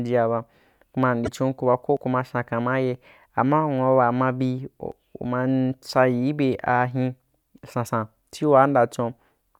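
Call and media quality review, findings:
Broken MP3 bit reservoir, 1.24 to 1.29 s: a short chirp, noise burst or hole, roughly one to two 26 ms frames long, right where the sound jumps ahead. Likely frames dropped upstream, so the next frame reached back into its reservoir and decoded another frame's bytes as its own.

Audio missing between chunks, 1.97 s: a hard skip, around 50 ms gone, both sides butted together with no silence. Likely the recorder losing a slice while closing one 3.0 s chunk and opening the next.

Audio missing between chunks, 4.92 s: same skip, about 50 ms dropped, landing one chunk period after the first. That 3 s spacing is the giveaway for a likely chunk boundary in the capture or processing chain.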